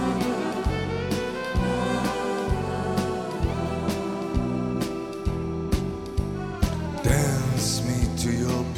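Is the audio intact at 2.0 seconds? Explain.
Yes, the audio is intact at 2.0 seconds, with no dropout, click, distortion or other fault audible at that point.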